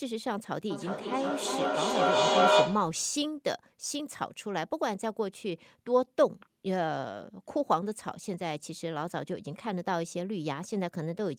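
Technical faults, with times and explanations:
0.7 to 3.05 s, feedback echo between two devices: each stretch of speech returns at a fixed spacing of roughly 0.4 s, with each pass thinner and more ringing. The repeats build rather than fade, peaking about 8 dB above the speech. A second device in the same room is playing this call, and this microphone picks that sound up and sends it back. The local echo canceller only removes its own playback, so the loop keeps circulating.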